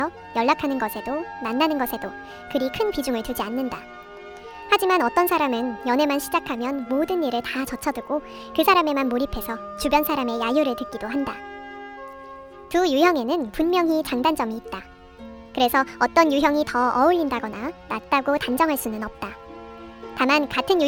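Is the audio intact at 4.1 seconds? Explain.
No, at 4.1 s, as everywhere else in the clip, there's a wrong sample rate problem. It's playing back about 1.38 times too fast with no rate conversion, which fits 32 kHz material run at 44.1 kHz, so everything sounds hurried and roughly 5.5 semitones too high.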